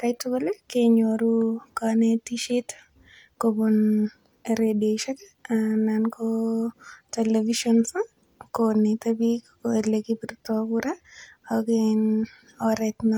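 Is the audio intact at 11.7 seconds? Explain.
Yes, the audio is intact at 11.7 seconds, with no audible fault at that moment.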